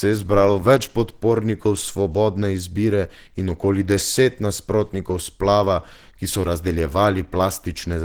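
Throughout the speech, the sound is plainly grainy and hoarse, with a rough, noisy texture where clean tones should be. The top end still reaches about 20.2 kHz. This is likely Opus compression in its hybrid mode, at a low bitrate that fits roughly 16 kbps.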